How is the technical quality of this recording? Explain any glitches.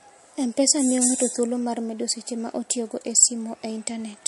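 Technical quality is limited by audible codec damage across the whole recording. Throughout, the speech has no content above about 11.3 kHz and a watery, swirly texture, with sibilants turning metallic. The likely cause is MP3 compression at a low bitrate, which fits roughly 48 kbps: the encoder runs short of bits, cuts the treble at a fixed point and switches weak frequency lines on and off between frames.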